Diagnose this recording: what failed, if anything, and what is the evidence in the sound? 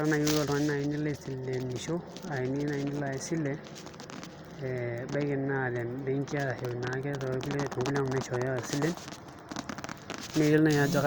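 Wi-Fi interference enters at the analogue wiring stage, from about 6.97 s to 9.6 s: a steady ticking underneath the speech at roughly ten per second, around 30 dB below it. A nearby Wi-Fi radio's beacon, every 102.4 ms, is being picked up and rectified by the audio circuit, so each transmission lands as a click. On a spectrogram it shows as a row of thin, evenly spaced vertical broadband lines; the waveform shows matching small regular spikes.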